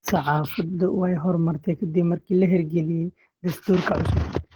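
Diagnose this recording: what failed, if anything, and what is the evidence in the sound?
The codec stage is the likely culprit: Opus compression, plainly audible from start to finish of the speech. Content extends to about 20.1 kHz, so the band has not been narrowed, yet the voice sounds hoarse and muffled, with grainy, noise-filled upper bands where the encoder keeps each band's energy but not its detail. That combination points to the hybrid speech mode, which fits a low rate around 16 kbps.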